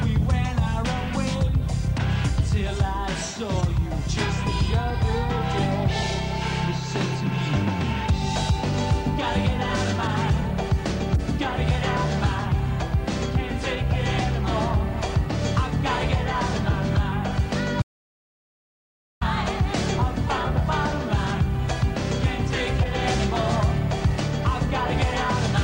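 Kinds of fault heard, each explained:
Audio dropout to silence: from 17.82 s to 19.21 s the sound stops abruptly and is replaced by 1.39 s of silence, with no room tone underneath, before resuming mid-flow; most likely the input signal was lost while recording continued, and that material is gone.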